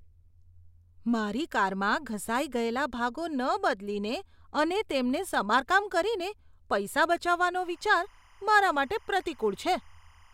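From 7.63 s, just after "સમારકામ કરીને પૈસા બચાવવાનો", a faint, steady chirping warble sits well below the speech and runs to the end. This is timecode bleed: a square-wave code switching near 1 and 2 kHz, which fits 25-frame timecode, leaking in from a neighbouring track or cable.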